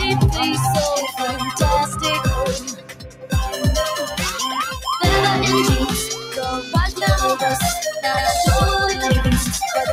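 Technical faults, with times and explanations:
Throughout, noise suppressor applied to music or sounds: a speech-oriented suppressor treats sustained tones and tails as noise, so level swings by about 10 dB, pumping and thinning the sound.
1.12–1.41 s, 2.58–3.34 s, 4.06–4.22 s, 6.15–6.38 s, sound cut by the noise suppressor: the suppressor misjudges these passages as noise and dips them by about 6, 15, 5 and 6 dB.
8.17 s to the end, doubled audio track: likely a second, slower capture path mixes in a full-band copy at roughly equal level, about 150 ms behind, which starts abruptly and adds a dry echo.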